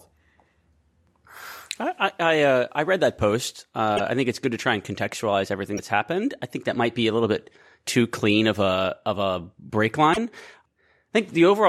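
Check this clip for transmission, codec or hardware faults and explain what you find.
Three short faults are audible in this speech, all consistent with a broken MP3 bit reservoir. They occur at 3.96 to 4.00 s, between "I read that post" and "I think it's good"; at 5.76 to 5.79 s, between "try and contextualize everything" and "happened I think that"; and at 10.12 to 10.18 s. Each is a brief glitch as the audio skips ahead. This is likely because dropped frames, which fits 26.1 ms MP3 frames, left the following frame reading borrowed bits from the wrong data.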